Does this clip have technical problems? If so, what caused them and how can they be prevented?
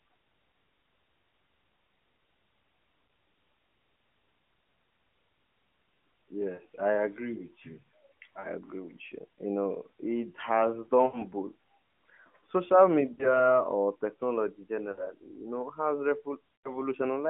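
Yes. Lost AMR speech frames occur at 3.08–3.10, 6.54–6.62, 8.40–8.47, 11.06–11.27, 13.14–13.48, 14.92–15.07 and 16.56–16.78 s. Frames failing their checksum were concealed by repeating the last good pitch and vocal-tract settings at falling gain, giving dips, drawn-out warbles and weak restarts. The gaps fit one to four 20 ms frames, within narrowband AMR's 4 kHz-limited sound. Better radio coverage and stronger error protection would prevent this.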